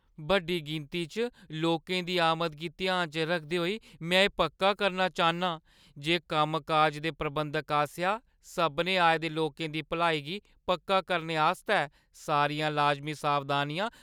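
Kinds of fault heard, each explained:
No technical faults detected.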